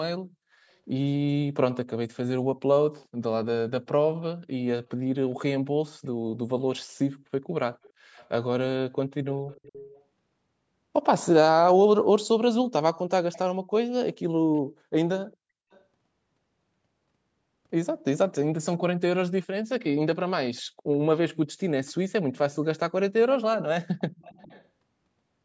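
Echo leak appears at 2.98 to 3.07 s, 5.28 to 6.38 s, 7.76 to 8.29 s, 9.32 to 10.03 s, 12.69 to 13.39 s, 14.54 to 15.84 s, 19.42 to 22.55 s and 24.0 to 24.67 s. A faint copy of the speech trails it by about 0.41 s, sitting roughly 20 to 35 dB below, loudest near 9.3 and 12.7 s. The likely cause is a far-end loudspeaker whose echo canceller let part of the microphone pickup return down the line.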